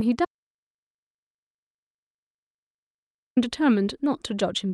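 At 0.25 s the speech cuts out into an audio dropout to silence lasting about 3.1 s, until 3.37 s. The input was likely lost while silence kept being written, so no room tone remains. The waveform shows a flat line and the spectrogram a blank gap.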